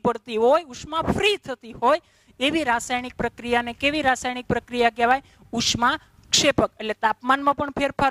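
From 0.40 s to the end, a block size mismatch (truncated) sets in: one stage writes longer blocks than the next reads, so each block's tail is discarded. This leaves a 100 Hz buzz at the block rate, with speed and pitch unchanged. Unlike mains hum, the buzz comes from discontinuities at the block seams rather than a steady added tone.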